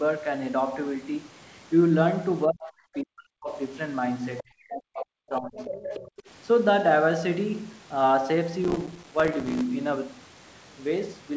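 From 2.46 to 3.49 s the talker's speech sags badly, down by about 40 dB at its deepest. That's speech suppressed in double talk. The far end was likely talking at the same moment, and the echo canceller, unable to separate the local voice from the loudspeaker echo, turned everything down. The same thing happens again from 4.42 to 5.73 s, with roughly a second of suppressed speech in each stretch.

Around those dips you can hear the other side's voice leaking through. There's a tiny scrap at 2.94 s, about 25 dB under the speech, and another at 4.4 s, about 20 dB down. Then from 5.56 to 6.23 s a longer, more obvious stretch comes through only about 10 dB below the talker. It's most likely residual loudspeaker echo that the canceller didn't fully remove from the mic.

From 8.64 to 9.61 s there's a gritty, tearing crackle riding on the speech, and it stops cleanly when the load eases. That's processor overload crackle. 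The processor kept missing its deadlines, and each missed buffer dropped out as a short hole of silence with hard edges. The texture fits tiny buffers of around 4 ms, dozens of them in a row, which together come across as a continuous rasp. The call path's top end stops at 8 kHz throughout.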